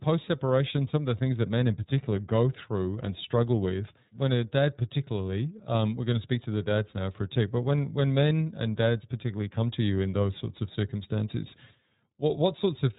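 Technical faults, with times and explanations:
Throughout, iLBC codec: nothing above 3.8 kHz passes, and the speech has a plainly audible rough, synthetic edge. Each frame's excitation is coded on its own, which fits 30 ms frames at about 13.33 kbps.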